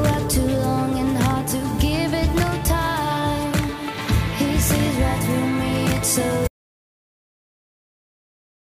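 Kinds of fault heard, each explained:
Audio dropout to silence: at 6.48 s the sound cuts off abruptly mid-flow and gives way to silence, with no room tone, lasting the final 2.3 s. The input was likely lost while the recorder kept writing silence.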